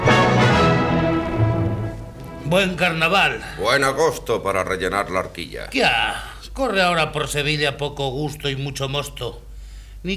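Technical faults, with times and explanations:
Nothing technical stands out here; there's nothing to flag anywhere in the recording.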